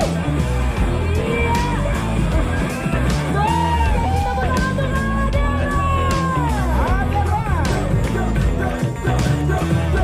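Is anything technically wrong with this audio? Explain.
Yes. At 4.04 s there is a brief blip from damaged data in a compressed stream. Part of the encoded data there is corrupt. The decoder misreads those frames and loses sync. It then recovers at the next valid frame header.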